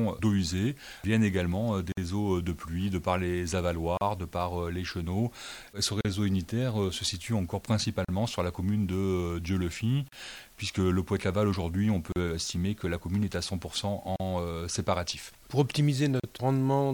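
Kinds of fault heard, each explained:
gap at a join of encoded pieces: The audio was encoded as separate pieces about 2 s long and joined without trimming, so each encoder run's start-up delay and padded final frame stayed in as silence. The sound drops out abruptly, its edges smeared, then resumes exactly where it stopped. The gap lasts 52 ms at 1.92 s, then 38 ms at 3.97, 6.01, 8.05, 10.09, 12.12, 14.16 and 16.20 s.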